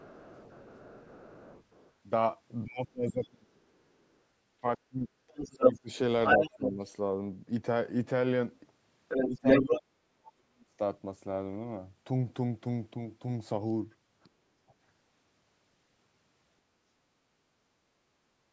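From 0.0 to 1.91 s, and again at 3.75 to 4.16 s, 5.28 to 6.72 s and 8.53 to 9.81 s, the other side's voice leaks through. It is faint at first, very faint around 4 s, then roughly as loud as the talker, likely from loudspeaker echo the canceller left behind. At 2.64 to 3.61 s, 4.61 to 6.8 s, 9.27 to 10.79 s and 14.35 to 14.75 s, the speech is suppressed in double talk. The voice dips deeply or drops out in pieces, likely because the canceller turned down both sides at once.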